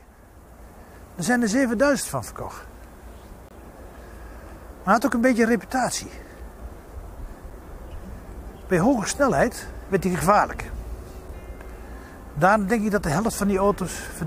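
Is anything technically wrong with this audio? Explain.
Yes, there are two kinds of fault.

An electrical switching spike occurs at 1.26 s: a sharp snap laid over the sound and lasting only a few milliseconds. It was likely caused by a nearby switch, motor or static discharge arcing briefly, with the audio line picking up that burst.

Gaps between stream segments occur at 3.49 to 3.51 s and at 7.50 s. The player inserts silence where the time stamps of consecutive segments fail to meet. The result is hard-edged holes of about 23 ms and 5.8 ms, spaced in a way that fits segments of about 4 seconds.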